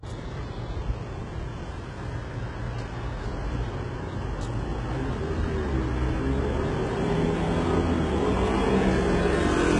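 From start to finish the treble sounds gritty and metallic, with highs that stay bright but lack real detail, most likely from heavy HE-AAC compression, consistent with a very low bitrate around 12 kbps. The top band is rebuilt from copied lower bands, so harmonics misalign above the crossover. A spectrogram shows repeated, smeared high-band patches and nothing above 10.9 kHz.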